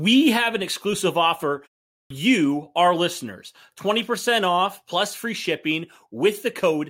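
After "have an exclusive offer", the output device went idle during the 0.31 s pause and needed 204 ms to wake. This is a clipped start after a pause: from 1.90 to 2.10 s the speech is swallowed, and the next words burst abruptly from silence without their first sounds.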